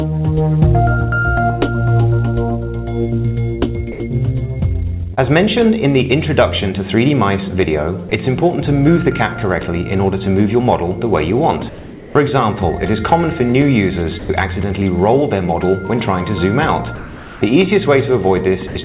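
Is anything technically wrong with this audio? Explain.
Yes, a few things. Sound dropped by the voice detector happens at 3.92–4.0, 8.09–8.11, 14.19–14.29, 16.95–17.41, 18.67–18.75 and 18.83 s: the sound gives way to steady hiss, most likely because the sender's detector mistook it for background and stopped transmitting.

Short concealed packet loss at 5.14–5.19 s: about 40 ms never arrived, so the receiver stretched the preceding sound to cover it, leaving a quick smear.

Comfort noise in place of the background runs from 11.69 to 12.15 s: the real background becomes flat, featureless noise about 3 dB quieter, likely synthetic filler during a transmission pause.

All of it sits on the call path, with nothing above 4 kHz.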